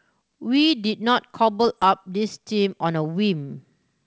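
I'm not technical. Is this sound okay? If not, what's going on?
No. From 1.64 to 1.84 s there are bit errors on an ADPCM link. A small share of the digital bits got flipped in transit. Each flip confuses the decoder briefly. You hear pops and a short, rough burst with jumpy loudness.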